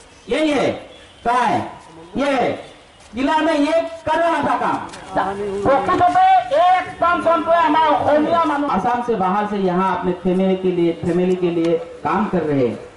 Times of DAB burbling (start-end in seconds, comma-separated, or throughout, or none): 0.68-0.84, 5.85-6.18